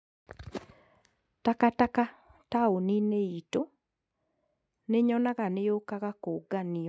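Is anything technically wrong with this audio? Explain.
No, this is speech that has passed through normal call microphone processing, with the lowest bass trimmed by its high-pass filter and nothing above 8 kHz, as expected for that path.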